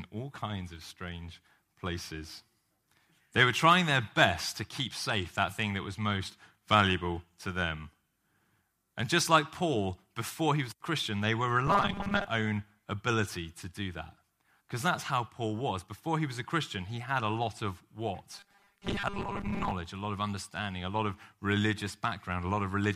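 A rigid, metallic buzz at 200 Hz is heard in the speech from 11.67 to 12.27 s, after "they were", and again from 18.32 to 19.72 s, after "had a lot of". This is robotic sound from repeated short buffers, likely from roughly 5 ms chunks looping while about half the real audio is skipped.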